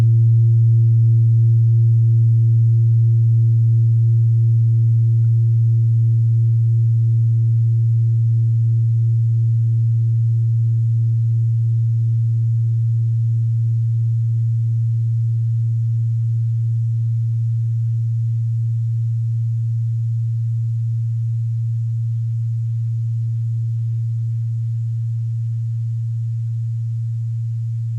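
No technical faults can be heard anywhere in the audio.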